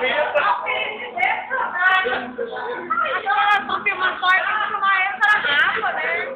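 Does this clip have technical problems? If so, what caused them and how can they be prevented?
Yes. At 5.27 s the audio lurches forward with a brief smeared blip rather than a hard click. That is compressed frames skipped: around 70 ms, about three frames of roughly 26 ms each, were lost or rejected by the decoder as damaged, and the overlapping neighbours blurred the join. Verifying file integrity after encoding and transfer, and re-encoding from the source when corruption appears, prevents it.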